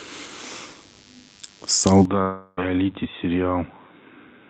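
DECT cordless phone buzz runs through the whole of this speech clip, a thin, steady 100 Hz drone with a dense stack of harmonics, sitting roughly 35 dB under the speech. A nearby cordless handset or base station pulses every 10 ms, and the audio circuitry rectifies those radio bursts into audible buzz. An input switch to a poorer device happens at 2.05 s and lasts to the end. With no gap, the sound abruptly turns duller and boxier, loses everything above 3.8 kHz, and drops by around 10 dB, with a faint new noise floor far beneath it. The likely cause is the system changing mid-recording to a narrower-band microphone or headset call profile. A long network dropout follows from 2.21 to 2.59 s. For about 0.36 s no real audio arrives, and the receiver fills the gap by stretching the last sound into a fading buzzy hiss. Speech then resumes further on, with the lost stretch likely never delivered by the network.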